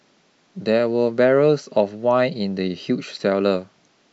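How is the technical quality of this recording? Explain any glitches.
The recording carries no technical glitches, with the signal path delivering the audio intact from beginning to end.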